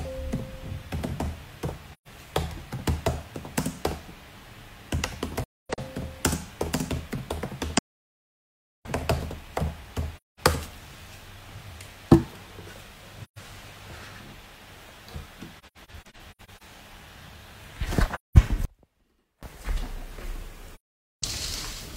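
Soft-edged holes, fading out and back in, break the sound at 1.93–2.08 s, 5.43–5.79 s (broken, longest hole roughly 0.3 s), 7.77–8.86 s, 10.16–10.40 s, 13.24–13.38 s, 15.58–16.63 s (scattered short holes of roughly 0.1 s), 18.14–18.37 s and 20.75–21.24 s. This is AAC frame loss with muting: missing frames were decoded as silence, and the overlapping windows smooth each edge.

From 18.65 to 19.43 s the sound drops abruptly to a faint residue about 30 dB down, then returns. This is likely an audio dropout to a faint residue, with the wanted signal lost while a live path after the break leaked a trace through.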